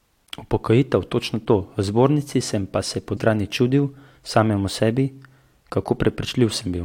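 At 3.16 to 3.18 s, compressed frames are skipped: the decoder drops a run of frames, and the jump points to around fifteen 23.2 ms frames, roughly 0.4 s of speech. The speech lurches forward into "čudil samemu sebi".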